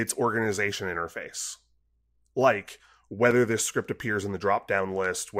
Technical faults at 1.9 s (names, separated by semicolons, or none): none